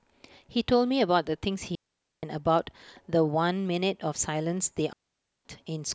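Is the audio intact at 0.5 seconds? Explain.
Yes, at 0.5 seconds the speech runs cleanly, with no dropout, click, distortion or other audible fault at that moment.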